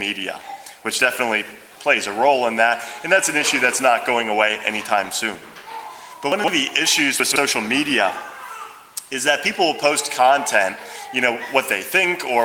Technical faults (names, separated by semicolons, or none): chunks out of order